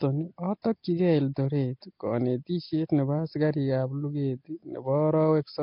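A rough, hissy halo and a smeared, underwater quality run through the whole of this speech recording, with nothing above 5.3 kHz. The likely cause is heavy Nellymoser compression, the old Flash microphone codec, which gives weak bands no bits and fills them with noise, consistent with roughly 22 kbps. At 0.62 to 0.64 s, a short hiss of about 24 ms precedes a sharp attack and softens it. This is pre-echo: the block's quantisation noise, sized for the loud onset, spreads into the quiet moment just before it.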